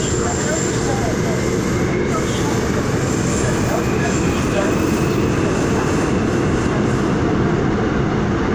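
No technical faults can be heard anywhere in the audio.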